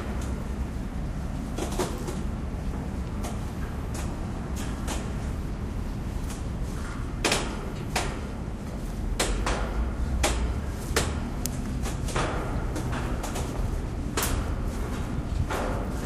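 Sounds, no audible faults.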